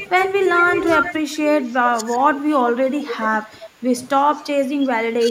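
A loudspeaker-side echo canceller that likely failed to remove everything its microphone picked up lets the speech return as an echo leak from 0.00 to 2.38 s. It arrives about 376 ms late and about 10 dB below the direct speech, so a delayed copy of the speech comes back. The same leak returns from 3.02 to 3.67 s at a 380 ms delay and about 10 dB down. A faint scrap at 4.35 to 4.42 s sits about 30 dB down, with a 381 ms delay.

Overlapping with that echo, speech suppressed in double talk comes from the canceller, which likely confused the talker with loudspeaker echo while both sides were active and turned both down. The speech dips by up to roughly 10 dB at 0.07 to 0.19 s, for about a tenth of a second. It dips again across 1.11 to 2.06 s, totalling roughly 400 ms. From 2.75 s to the end, roughly 1.5 s is pulled down.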